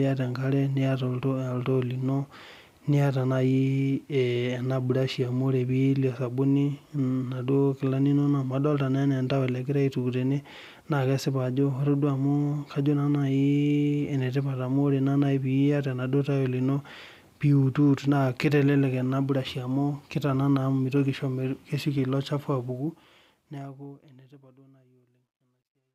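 Speech that fades out over its last few seconds, from roughly 22.7 s to 25.9 s, shows truncation distortion on a fade from 22.65 s onward. The gain stage drops the low-order bits without dither, so as the level shrinks the waveform collapses into coarse steps. The grain fits roughly 12-bit resolution. It is worst from 24.94 s to the end, where the tail turns gritty.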